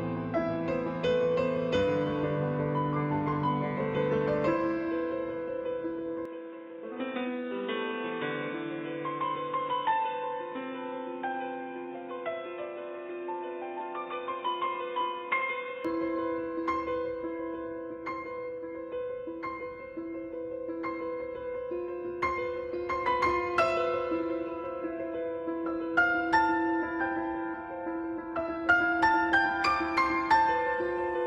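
From 6.25 s to 15.85 s the sound turns abruptly dull and boxy, with nothing above 3.8 kHz, a somewhat lower level and a different hiss, then clears again. The likely cause is the input switched to a poorer device; unlike a simple filter, its own noise floor changes too.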